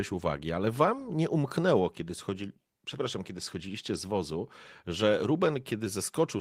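Nothing goes wrong in this speech clip; the Opus voice compression, running at 24 kbps in its hybrid mode, keeps the full audio band.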